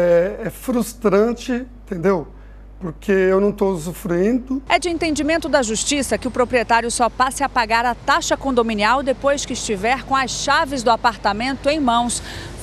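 From start to finish a steady 50 Hz mains hum runs under the sound, roughly 20 dB below it, where power-line current has leaked into the signal path. It is a constant low drone, drawn on a spectrogram as an unbroken line at 50 Hz.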